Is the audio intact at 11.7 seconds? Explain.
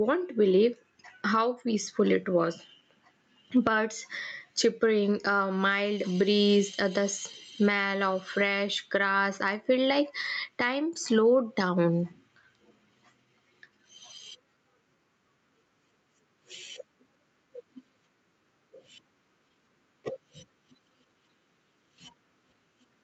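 No. At 11.7 s, as throughout the clip, there is gain pumping. The input gain was likely set far too high, so a fast limiter or compressor clamps down on every loud syllable and lets go in the pauses. The level swings by around 15 dB, leaving the speech squashed and flat in dynamics. The top ending near 8 kHz is normal for this call path.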